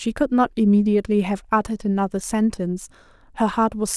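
Listening closely to the speech turned up nothing that stood out as a technical problem at any point.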